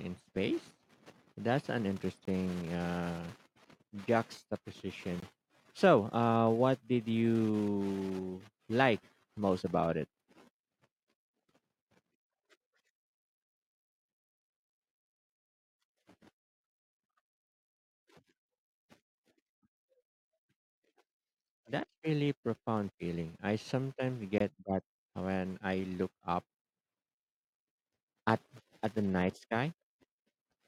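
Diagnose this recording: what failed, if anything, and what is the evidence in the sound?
Driver or buffer failure: three blocks of digital silence at 2.25, 5.20 and 24.38 s, each 23 ms long, fit a 1024-sample buffer left unfilled in time. On the waveform they appear as flat silent runs. On the spectrogram they appear as blank vertical strips.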